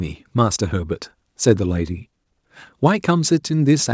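No technical faults can be heard in this speech.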